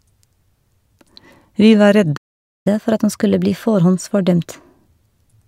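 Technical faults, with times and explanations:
2.16–2.67 s, playback stall: the speech falls silent for about half a second, then resumes exactly where it broke off, with nothing skipped. This is likely the player running out of buffered data or its output thread being blocked. Unlike a dropout, no content is lost.
2.67–5.47 s, catch-up at higher speed: straight after the gap the speech runs 1.1 times fast, its pitch raised by roughly a semitone and a half, to win back the lost time. Pitch rising with speed marks resampling rather than time-stretching, and it lasts to the end.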